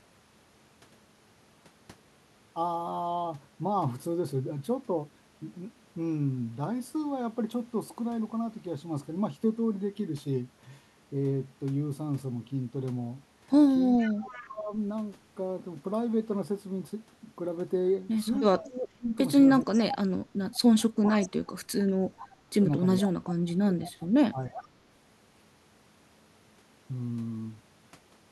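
From 13.98 to 14.47 s an echo leak appears: a distinct copy of the speech arriving 434 ms late, about 20 dB below it, likely from a loudspeaker echo canceller letting residue through. The fixed lag and a discrete repeat rather than a smooth decaying tail set it apart from room reverberation.

Overlapping this, from 14.04 to 14.72 s, speech suppressed in double talk pulls the talker down by roughly 15 dB for about half a second. The likely cause is the canceller ducking both sides while the far end speaks. The dip is partial and tracks the overlap, unlike a dropout's clean silence.

From 18.58 to 19.99 s it returns, deeper at around 20 dB over about a second.

Echo leak follows from 19.73 to 21.28 s, again 434 ms behind.

The heaviest suppression runs from 20.98 to 24.64 s, reaching about 30 dB and totalling around two seconds in pieces. Brief echo scraps break through at 22.19 to 22.37 s (about 25 dB down), 23.29 to 23.34 s, and 24.54 to 24.68 s (about 15 dB down).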